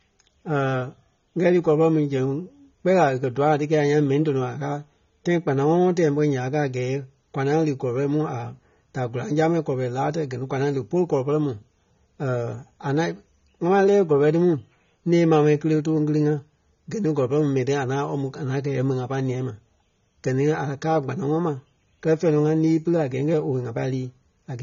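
AAC compression runs through the whole clip. The speech is plainly dull and smeared, with nothing above 6.9 kHz and a watery, fizzy edge on sibilants. The likely cause is an AAC-LC encoder starved of bits, consistent with roughly 24 kbps, lowering its cut-off and thinning the spectrum.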